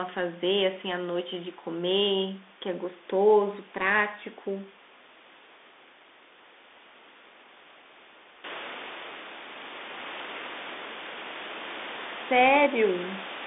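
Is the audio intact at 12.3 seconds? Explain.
No. At 12.3 s, as through the whole clip, the speech carries Bluetooth CVSD headset codec damage. CVSD sends one bit per sample, up or down, with an adapting step, and the band here sits at roughly 250 Hz to 3.6 kHz with nothing above 3.8 kHz. The speech sounds muffled and boxy, s sounds turn scratchy, loud bright passages distort as they outrun the step, and a granular hiss sits underneath, alongside room noise that rose around 8.5 s.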